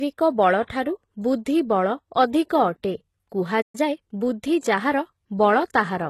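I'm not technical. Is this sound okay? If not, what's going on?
No. The speech has four separate problems.

The first runs through the whole clip. The speech sounds like it was squeezed hard to save space, most likely by HE-AAC compression. This method keeps the lower sounds and then fakes the treble by copying lower parts upward. The faked treble doesn't quite match the rest, so s sounds come out gritty, metallic or lispy.

Second, at 3.61 seconds the sound simply stops. It stays silent until 3.75 seconds, a gap of about 120 milliseconds. This is a playback stall. The player most likely ran out of audio to play, or got held up, and had nothing to output. You hear it as a brief, unnatural hole in the speech.

Third, from 3.75 to 4.23 seconds the speech rushes. This is time-compressed catch-up. After the stall, the player was behind. To catch up, it cut out tiny slices and blended the edges together. 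That made this stretch play about 1.25 times faster. The pitch stays normal, so it doesn't sound squeaky. It just sounds hurried.

Fourth, from 4.59 to 4.63 seconds there is pre-echo. The compression works on short chunks of sound and spreads its noise across each chunk. Here a sudden sharp sound sits late in a chunk. Some of that noise leaks into the quiet moment just before it. You hear a short hiss, about 42 milliseconds long, right before the attack. The attack itself sounds softened and smeared.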